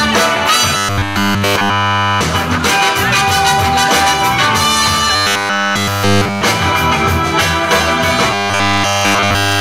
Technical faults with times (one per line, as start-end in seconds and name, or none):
0.77-2.21 robotic sound from repeated short buffers
5.15-6.43 robotic sound from repeated short buffers
8.32-9.60 robotic sound from repeated short buffers